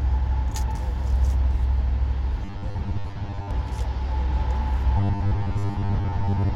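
From 2.45 to 3.51 s and from 4.97 s to the end, the sound becomes a rigid 100 Hz buzz: robotic sound from repeated short buffers, likely a looped 10 ms chunk.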